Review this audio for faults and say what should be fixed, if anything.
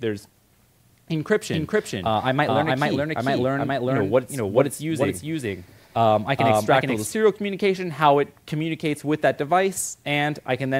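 A doubled audio track runs from 1.52 s to 7.08 s. A second full-band copy of the audio plays about 0.4 s behind the first. It is roughly as loud as the original. It has no decay and no room colour. It starts and stops abruptly at those times. The likely cause is the sound being picked up again through a slower path, or an edit leaving two copies out of step. To prevent it, route each source through one capture path only, and check edits for overlapping duplicate regions.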